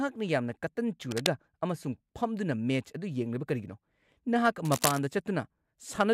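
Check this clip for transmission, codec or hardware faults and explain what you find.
Cable scratch noise shows up twice in this speech clip, from 1.11 to 1.28 s and again from 4.64 to 5.00 s. The likely cause is a worn cable, connector or control being moved, so its contact resistance jumps around rapidly and injects dense, irregular bursts of noise into the signal. Each burst sits only a little below the speech in level and is heard as a brief scratching, rustling layer over it, the second lasting about twice as long as the first.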